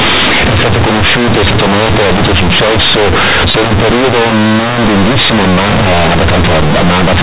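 From start to finish, the speech is wrecked by companded audio read as linear. The A-law bytes from the telephone coding are played as plain 8-bit samples. Nothing expands them first. Every sign change throws the output across about half its range. Quiet passages come out as large as loud ones. The result is harsh, very loud, buzzy distortion, with strong noise filling the pauses. The telephone coding itself passes nothing above 4 kHz.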